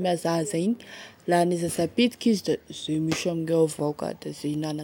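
At 0.76 s, just before "la ane", a brief stutter marks the first of four overlapping chunks faults. The same hitch returns at 1.77 s, right after "la ane", then at 2.78 s and 3.79 s. The audio was handled in 1.0 s blocks, each starting about 13 ms before the previous one finished, so that sliver of speech plays twice at every join. The regular one-second spacing and the doubled material, rather than a silent gap, set this apart from dropouts.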